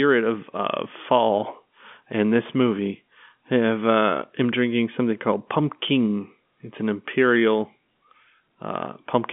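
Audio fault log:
No faults logged; the speech sits in a telephone band of 150 Hz to 3.5 kHz with nothing above 3.7 kHz, as expected of G.711 telephone coding, which fits a 64 kbps A-law line.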